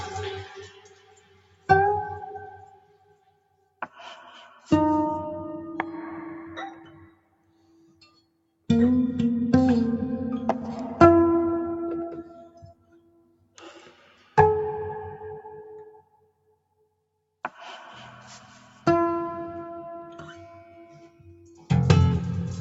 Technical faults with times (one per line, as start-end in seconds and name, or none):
0.00-22.61 noise suppressor applied to music or sounds
0.43-1.69 sound cut by the noise suppressor
2.27-3.96 sound cut by the noise suppressor
6.79-8.69 sound cut by the noise suppressor
12.23-14.37 sound cut by the noise suppressor
15.99-17.03 sound cut by the noise suppressor
21.08-21.70 sound cut by the noise suppressor